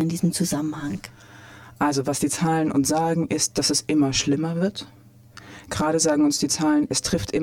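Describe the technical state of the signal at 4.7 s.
At 4.7 s the signal carries channel delay (comb filtering), present throughout the clip. One channel lags the other by around 10 ms, and summing them cancels shared content at evenly spaced frequencies, starting near 50 Hz and repeating every 100 Hz or so, leaving a hollow, phasey sound.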